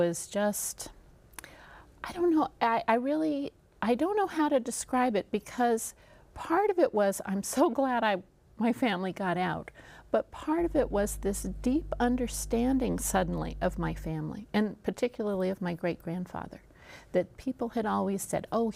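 From 10.58 s to 14.13 s a mains hum appears: a steady 50 Hz tone with low harmonics, sitting roughly 10 dB below the signal. Power-line current has coupled into the audio path, as a ground loop or nearby transformer would cause.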